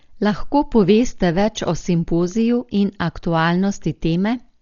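From start to finish the speech is band-limited to nothing above 7 kHz and sounds dull, with rough, fluttering noise around tones, likely from heavy Dolby Digital compression at about 40 kbps.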